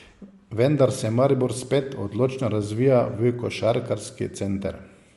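Bluetooth LC3 compression, likely, runs throughout the speech: plainly audible codec damage, and nothing above 11.6 kHz. The transform codec discards upper spectrum to save data, consistent with 10 ms frames at around 48 kbps, leaving the top band cut off.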